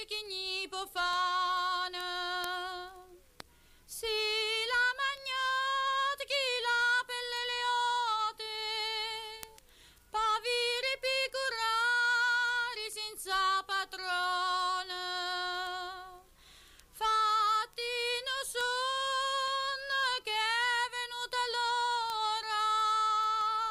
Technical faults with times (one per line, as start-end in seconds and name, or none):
0.26-23.41 word clock ticks